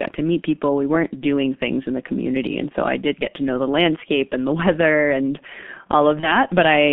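The speech runs through the G.723.1 codec at a low rate, which fits about 6.3 kbit/s, with a band of 150 Hz to 3.5 kHz, leaving it heavily muffled and hoarse with smeared consonants. From 6.20 to 6.37 s, VoIP packet loss is concealed by the speech codec: about 30 ms of audio, consistent with a single lost frame, is replaced by a fading extrapolated buzzy tone or coloured noise, and the sound stays weakened until recovery.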